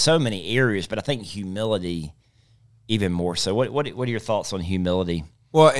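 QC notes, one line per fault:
No faults detected in this speech clip.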